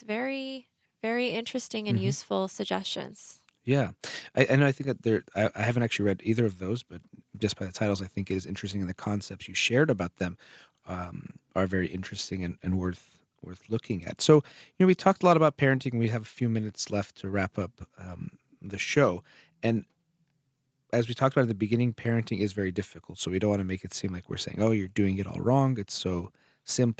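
Nothing stood out on listening to this speech, which carries the usual call microphone processing with its top end stopping at 8 kHz.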